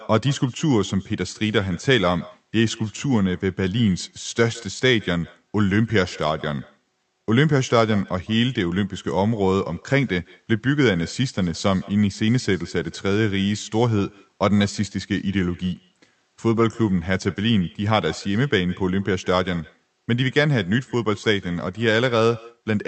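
Speech runs through the whole clip with an echo with no canceller: a faint copy of every phrase returns around 150 ms later, about 25 dB below the direct speech. The far end's loudspeaker feeds its microphone, and nothing subtracts that signal before it travels back. On a spectrogram each syllable carries a weak, smeared ghost just to its right. The waveform shows a low tail after each burst, and the content above roughly 8 kHz is cut off by the call codec.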